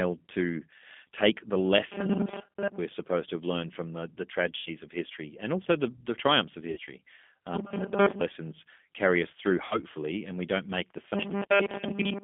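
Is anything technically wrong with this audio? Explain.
Yes, there are three kinds of fault.

Throughout, the audio has passed through the G.729 codec, here the G.729A variant at 8 kbit/s. The speech is rebuilt from a short-term vocal tract filter, a pitch predictor and a sparse pulse pattern rather than coded as a waveform, and the line band is limited to roughly 200 Hz to 3.4 kHz. The damage is plainly audible: a thin, telephone-band sound with a rough, slightly synthetic texture on the speech.

VoIP packet loss concealed by the speech codec occurs three times: 4.57 to 4.70 s, where 90 ms of audio is missing (which fits three lost packets), and 6.71 to 6.80 s and 9.65 to 9.83 s, each missing 60 ms (consistent with two packets). In each gap the decoder keeps extrapolating from its last pitch and filter state while lowering the gain, so the speech smears into a fading buzzy or noisy tone. 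Because each frame depends on the previous one, the sound stays weak or distorted briefly after real packets resume.

From 11.15 s to the end at 12.23 s, robotic sound from repeated short buffers takes over. The likely cause is audio arriving too seldom, with playback filling the gaps by looping the most recent fragment while most of the real signal is skipped. The loop imposes a fixed 200 Hz buzz, which points to a buffer of about 5 ms. The result is a rigid, metallic drone that only loosely follows the original speech.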